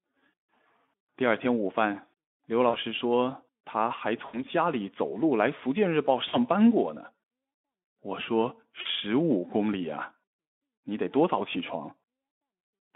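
Packets dropped out of the VoIP stream four times, and each time the speech decoder filled the gap with VoIP packet loss concealment, extrapolating from its last pitch and filter at falling gain. Around 2.69 s, 6.29 s and 8.81 s, about 40 ms went missing. At 4.25 to 4.43 s the gap was about 80 ms. Each gap heard as a smeared stretch that fades, with the narrowband Speex sound staying weak briefly afterward.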